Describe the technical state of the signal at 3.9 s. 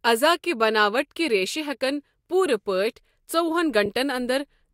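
A brief garbled flutter from 3.84 to 3.89 s: frames out of order, two neighbouring short runs swapped, likely two codec frames each.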